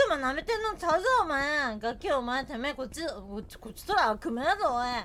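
At 3.52 s a screen or video cable starts coupling into the audio path, causing video or display buzz that lasts to the end. The interference enters at the 60 Hz picture field rate, giving a raspy buzz with hash above it, roughly 35 dB below the sound.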